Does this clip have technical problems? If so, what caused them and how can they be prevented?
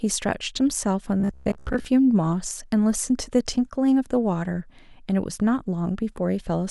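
Yes. New audio likely arrived too seldom, so a roughly 15 ms buffer kept repeating. This caused robotic sound from repeated short buffers between 1.20 and 1.85 s, a metallic 66.8 Hz buzz. A steadier feed and a larger jitter buffer would prevent it.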